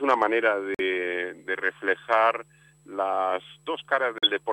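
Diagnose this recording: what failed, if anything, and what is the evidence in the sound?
The failure sits at the codec stage: a corrupt frame muted, twice. The sound cuts abruptly to silence at 0.745 s for 60 ms and again at 4.181 s for about 78 ms, gaps that fit a few whole compressed frames. Damaged frames were rejected by the decoder and replaced with silence. Unlike a buffer underrun, nothing stalls or shifts afterwards and timing is kept. Unlike packet-loss concealment, the holes are plain silence rather than smeared fill.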